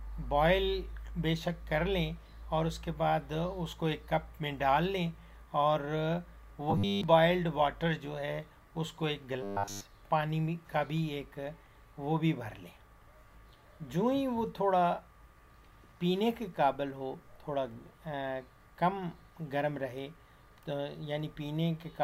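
Audio likely arrived too seldom, so short buffers of about 10 ms were repeated in place of skipped audio. From 6.70 to 7.03 s (mostly repeated) and 9.43 to 9.82 s (entirely repeated), this robotic sound from repeated buffers imposes a rigid, metallic 100 Hz buzz.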